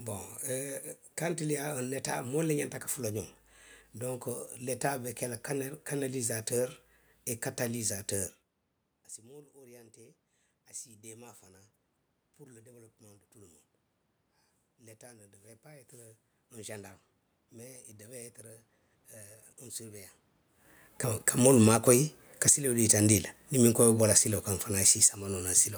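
From 21.16 to 25.19 s, automatic gain falling pulls the level down by about 8 dB. Unlike the talker moving near 20.5 s, the room noise sinks along with the speech.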